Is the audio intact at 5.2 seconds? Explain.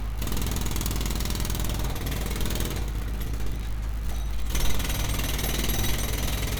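Yes, the audio is intact at 5.2 seconds, with no dropout, glitch or other fault at that point.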